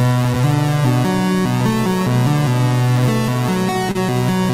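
At 3.91 to 3.96 s the audio briefly smears and wobbles before it settles again. This is short concealed packet loss: 40 ms of data never reached the decoder in time, and the receiver filled 30 ms by extending the preceding sound, then blended back.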